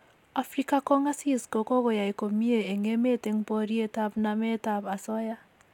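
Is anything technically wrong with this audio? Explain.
No, nothing technically wrong can be heard in this speech recording.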